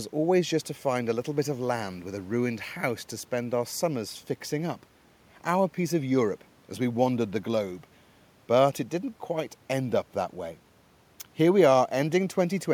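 The speech signal shows no technical faults, and the only thing beneath it is the room's own background noise, sitting about 35 dB below the speech, which is part of the recording rather than anything introduced by the system.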